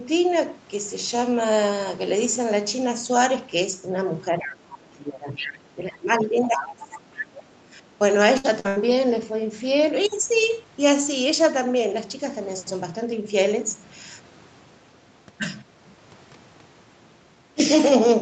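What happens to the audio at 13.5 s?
Nothing goes wrong at 13.5 s: the speech continues intact through that moment, carrying only the ordinary band limit near 8 kHz that the call path imposes throughout.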